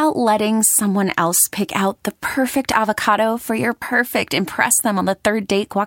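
No audible technical faults turn up anywhere in this speech recording.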